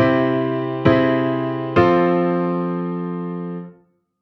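No technical faults can be heard anywhere in the audio, and the signal stays steady and intact throughout.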